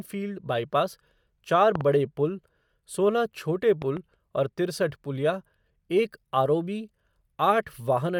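Throughout the speech there is a grainy, breathy edge on the upper frequencies, with the treble sounding noisy rather than clean. This is Bluetooth LC3 compression, likely the cause, and the damage is plainly audible. The character fits LC3 at around 48 kbps with 10 ms frames: the codec discards much of the fine upper spectrum and fills the gaps with noise. That noise fill is what separates it from a plain lowpass. The band itself stays wide, with content reaching up to about 20.2 kHz, so the fault is a coarse texture rather than a dull sound.

From 1.75 to 1.83 s comes a loud pop: two sharp pops in quick succession, peaking about 15 dB above the speech. A sudden voltage step or pulse, likely from a switch, plug contact or static discharge, was added to the signal. The circuitry downstream shaped each pulse. Unlike a dropout or an edit glitch, nothing is removed, and the speech carries on underneath. 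A second loud pop follows from 3.82 to 3.99 s, again as a double pop but softer, about 5 dB above the speech.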